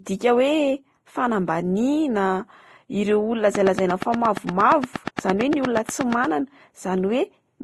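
Transcoding between lossy codecs runs through the whole clip. The speech was likely encoded at a low bitrate by one codec and then re-encoded by another. The sound points to roughly 30 kbit/s Vorbis followed by Opus. Each stage smears and rings in its own way, those artefacts stack, and nothing survives above 12 kHz.

A train of clicks runs from 3.55 to 6.25 s: about twenty near-identical pulses at a regular 8.6 per second, peaking around 15 dB above the speech. This ticking, likely from electrical interference or a faltering interface, sits on top of the speech and continues through its pauses.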